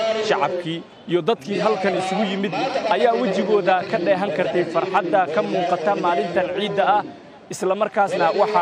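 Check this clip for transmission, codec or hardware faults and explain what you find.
Nothing in the signal points to a transmission, codec or hardware problem.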